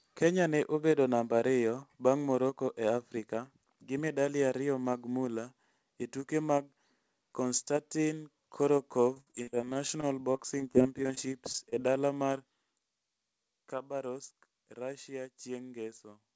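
From 9.14 to 11.74 s the speech turns choppy and robotic, with a couple of dozen brief holes, the longest about 57 ms, before "e dala mar". This is repeated packet loss: audio kept arriving late or not at all, and each gap was bridged by stretching the previous sound, covering about 18% of that stretch.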